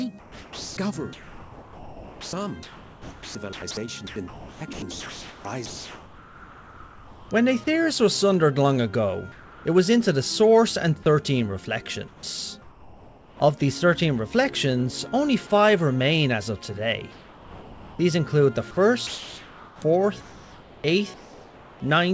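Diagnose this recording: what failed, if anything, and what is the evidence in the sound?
The failure is in call processing at the sending end. From 0.20 s to 7.31 s the sound is choppy, with quiet edges and soft passages repeatedly replaced by a flat hiss, about 5.3 s of fill in total. The likely cause is the voice detector switching transmission on and off, with the gaps filled by comfort noise. Packet-loss concealment would instead stretch or repeat the surrounding sound, and dropouts would leave clicks or silence.

The same stage produces comfort noise in place of the background in four later pauses: 9.32–9.65 s, 12.08–13.40 s, 17.12–17.99 s and 19.07–21.80 s. In each, the real background gives way to steady, featureless noise, likely generated by the receiver during discontinuous transmission. At 9.3 s the room sits about 24 dB below the loud parts and the fill drops a further 4 dB; at 17.1 s the figures are about 23 dB and 5 dB. 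A noise gate would leave near-silence rather than hiss. The band stops at 8 kHz, which fits G.722 at 64 kbps on the call path.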